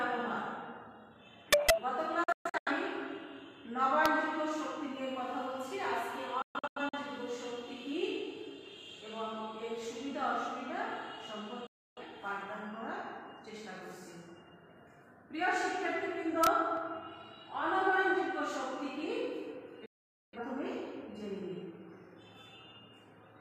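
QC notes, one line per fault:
1.53–1.70 s, integer overflow: harsh, violent cracks, sharper than clipping. The loudest peaks went about 9 dB past the largest integer value and wrapped to the opposite sign instead of being limited.
2.24–2.71 s, digital broadcast dropout: the sound drops into several short silent holes, with 3 ms fades, over about 430 ms. Frames were lost or failed their checks, so the receiver muted. About 300 ms is gone in all, with the longest hole 128 ms, which fits roughly 43 ms frames.
4.06 s, integer overflow: one brief crack where a peak went about 1 dB over the limit and flipped sign.
6.42–6.98 s, digital broadcast dropout: the same broken muting, about 300 ms lost across roughly half a second. The longest gap is 128 ms.
11.67–12.02 s, digital broadcast dropout: the sound cuts out again with short 3 ms fades, and about 300 ms is lost.
16.44–16.47 s, integer overflow: a short crack where the level went about 1 dB past full scale and wrapped.
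19.86–20.38 s, digital broadcast dropout: this is the longest loss, about 470 ms muted before the sound returns.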